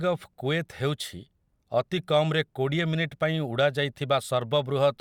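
Speech, with no audible faults.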